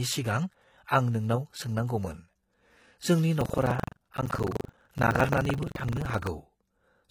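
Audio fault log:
throughout: transcoding between lossy codecs. The speech was likely encoded twice, which fits an MP3 stage near 64 kbit/s followed by low-rate HE-AAC. The second codec re-encodes the first one's smearing and adds its own swirly haze, and the lowest cut-off in the chain stays.
3.37 to 6.31 s: buffer tearing. The writing program and the playback hardware slip out of step, so about a fifth of each buffer replays audio from roughly 150 ms earlier. The hard joins produce a robotic 23.4 Hz rattle under the speech, which fits a 2048-sample buffer.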